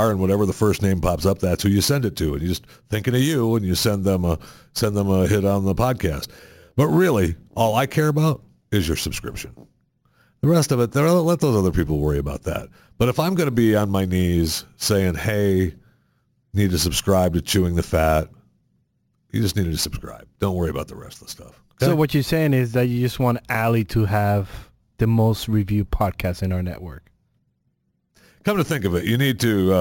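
Throughout the speech, imaging from sample-and-hold upsampling from 16 kHz to 44.1 kHz adds a metallic fizz about 20 dB down, which a spectrogram shows as speech mirrored between 8 and 16 kHz.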